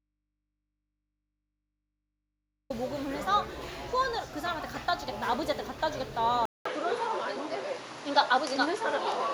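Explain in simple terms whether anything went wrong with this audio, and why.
From the start until 2.70 s there is likely an audio dropout to a faint residue: only a low hum, then the sound snaps back abruptly, unlike a gentle fade. At 6.45 s, after a brief silence of about 0.2 s, the sound turns duller and different in level, likely an input switched to a poorer device rather than another dropout.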